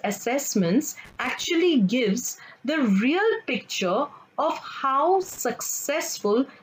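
Loose connector crackle breaks into the audio twice, from 1.05 to 1.44 s and from 5.23 to 5.40 s. A worn contact briefly making and breaking chops the signal into ragged bursts. This differs from the steady background of record crackle or regular digital clicks.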